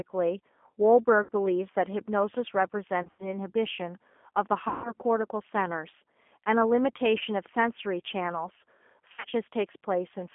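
Speech, carried over the G.729 codec throughout. The audio is narrowband, roughly 200 Hz to 3.4 kHz, with nothing above 4 kHz. The low-rate synthesis leaves the voice plainly rough and slightly synthetic. VoIP packet loss concealed by the speech codec occurs at 1.23, 3.03, 4.68, 7.19 and 9.12 s. The gaps run from 20 ms up to 160 ms; at 3.03 and 9.12 s the losses are scattered. In each gap the decoder stretches the last sound into a fading buzzy tone or coloured noise. The voice then stays weak or distorted for tens of milliseconds or more after packets return, the longest loss ending at about 4.93 s.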